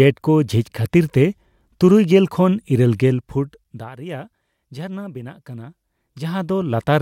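No technical faults are audible.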